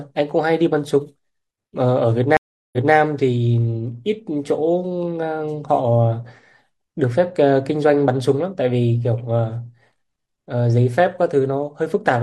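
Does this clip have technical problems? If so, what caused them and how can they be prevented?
Yes. Stream reconnect at 2.37 to 2.94 s: the connection dropped, leaving 360 ms of silence, then a fresh decoder resumed 213 ms earlier from resent data. A steadier network link, deeper client buffering and resuming at the exact dropped position would prevent it.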